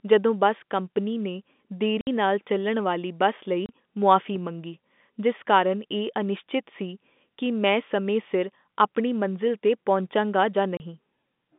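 At 2.01 s the speech drops out for 60 ms, just before "ਨਾਲ ਚੱਲਣ ਵਾਲੀ ਬੱਸ". This is packet loss filled with silence. Audio packets failed to arrive, and the receiver played nothing in their place. The hole has hard edges. A 30 ms gap follows at 3.66 s, right after "ਨਾਲ ਚੱਲਣ ਵਾਲੀ ਬੱਸ", and another at 10.77 s. The 60 ms gap is exactly twice the 30 ms ones, which fits two 30 ms packets going missing together.

From 4.36 to 4.73 s there is a phantom power thump, just before "ਜਿਸ ਕਾਰਨ ਇਹ ਅਨਿਸ਼ਚਿਤ". A supply was switched on a live input. The voltage step passed through the coupling capacitors as a deep, low thud. It dies away over about 83 ms. It sits under the telephone-band sound of the G.711 line, which carries speech only up to about 3.6 kHz.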